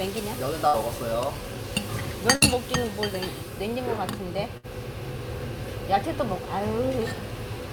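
Sounds with three bursts of packet loss at 0.67, 2.35 and 4.57 s: each roughly 60 ms gap holds the last sound and fades it rather than dropping to silence, then resumes with material missing.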